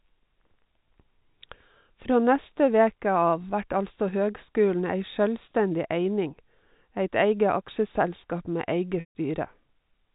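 Around 9.0 to 9.15 s there's packet loss with pitch repetition: about 150 ms of the speech goes missing. The receiver fills the gap by repeating the last pitch period, which buzzes briefly, fades to silence, then cross-fades back into the narrowband G.711 telephone sound.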